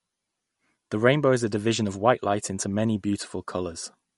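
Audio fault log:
throughout MP3 compression: likely a low-bitrate encode near 48 kbps, removing everything above 11.2 kHz and dropping weak frequency lines, leaving the speech dull and watery.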